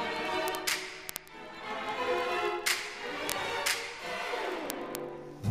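Word clock ticks run from 0.12 s to 5.50 s: sharp clicks of uneven strength recur about every 20 ms. The receiver isn't locked to the sender's clock. Drifting by roughly a thousand parts per million, it drops or repeats one sample at each slip.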